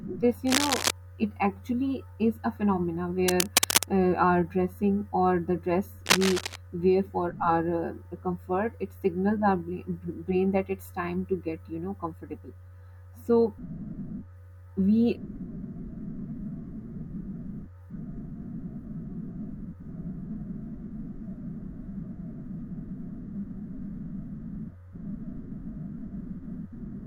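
A speech clip with cable scratch noise at 0.47–0.91 s, 3.28–3.89 s and 6.06–6.56 s: dense, ragged rustling bursts about 5 dB louder than the speech in the first two and roughly as loud as it in the third, rather than isolated clicks, likely from a worn connector being moved.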